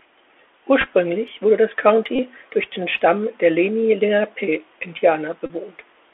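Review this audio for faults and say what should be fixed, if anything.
Bluetooth CVSD headset codec, throughout: speech is confined to roughly 300 Hz to 3.4 kHz, with scratchy sibilants and granular hiss from a one-bit delta coder whose step size can't keep up, which fits 64 kbps CVSD. That grainy hiss and overload roughness, rather than swirling or warbling, sets it apart from a low-bitrate perceptual codec. Prevent it by switching the headset to a wideband profile such as mSBC or LC3, or by recording locally.

Bluetooth headset packet repeated, at 0.81 to 0.87 s, just before "wurde das"; 2.16 to 2.19 s, between "wurde das" and "durch den"; and 5.46 to 5.50 s: lost packets were replaced by replaying the previous one. The first event is broken into short runs of about 7 ms scattered over 60 ms, and each event covers roughly 30 to 34 ms of lost audio. Repeating every 3.75 ms gives a brief buzz near 267 Hz rather than the silence of a plain dropout. 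Prevent it by reducing radio interference and distance between the headset and phone, or by using a wired microphone.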